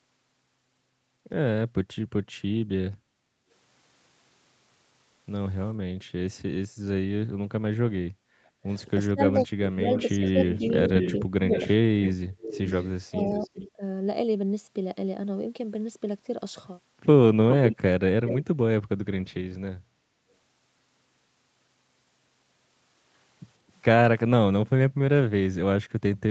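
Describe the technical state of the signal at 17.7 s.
A slightly quieter copy of the speech trails it by 416 ms from 17.5 to 18.45 s. This echo leak is likely loudspeaker pickup the echo canceller missed.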